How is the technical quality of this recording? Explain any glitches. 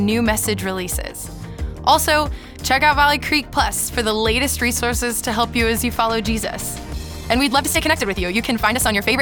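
The recording has one clear fault, a time-stretched section running from 6.90 s to the end at 9.22 s. Here the pace jumps abruptly to about 1.6 times normal speed while the pitch stays where it was, so the last stretch sounds rushed. This is likely software compressing that portion to fit a shorter duration, preserving pitch by discarding short slices of audio. The dropped fragments leave a hurried texture.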